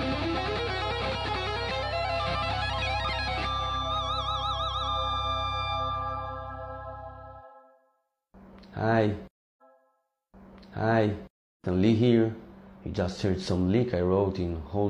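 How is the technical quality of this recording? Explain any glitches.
A stretch of the audio plays twice. At 9.57 s the programme jumps back with a small blip and repeats roughly 2.0 s of material, running until about 11.57 s. This is a stream segment repeated: the player fetched or queued the same chunk of the stream twice, so that piece is played again before the stream moves on.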